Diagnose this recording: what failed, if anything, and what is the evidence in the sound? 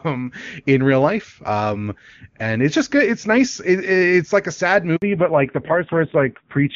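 Network stage: a handover gap at 4.96 s, right after "it's like a sad." No frames arrived for 60 ms, so the speech drops abruptly to silence.

Codec stage: fallback to narrowband from 5.02 s onward. Nothing above 4 kHz remains, and the clear wideband speech turns dull and rough, which fits a low-rate AMR narrowband mode.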